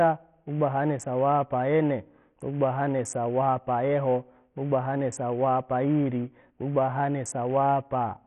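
A speech recording whose treble flickers and drops in and out for the whole clip, with a gritty, grainy noise and a metallic aliasing clinging to the sound, and nothing at all above 16.8 kHz. The damage is heavy and points to a very starved link, fitting a bitrate near 48 kbps. The likely cause is Bluetooth SBC compression, where a small bit pool leaves the upper sub-bands with almost no bits and quantises the rest coarsely.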